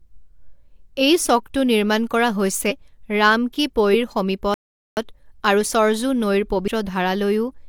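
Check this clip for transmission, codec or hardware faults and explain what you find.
Three short compressed-frame skips and one playback stall are audible.

Compressed frames skipped at 2.67, 3.90 and 6.64 s: whole frames of coded audio were never played, so the speech jumps ahead by about 100, 150 and 150 ms, which fits runs of two to four frames of about 43 ms.

Playback stall from 4.54 to 4.97 s: the speech cuts to silence mid-flow for about 0.43 s, then resumes. The likely cause is the player running out of data, or its thread being blocked, until output recovered.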